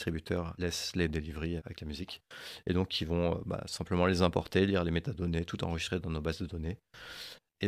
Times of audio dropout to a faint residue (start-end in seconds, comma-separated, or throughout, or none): none